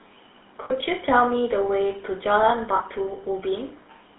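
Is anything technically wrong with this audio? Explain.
Yes. Two faults can be heard.

Throughout, the speech carries the GSM full-rate codec sound. This coder rebuilds the vocal tract from a coarse pulse excitation, so voices turn buzzy and gravelly. The band fits a 13 kbps phone line, passing only about 250 Hz to 3.7 kHz.

Lost GSM frames occur at 0.64 to 0.72 s, lasting 60 ms, and at 2.76 to 2.81 s, lasting 40 ms. The decoder repeats the last good frame. Each gap becomes a brief, rough metallic ring instead of clean speech.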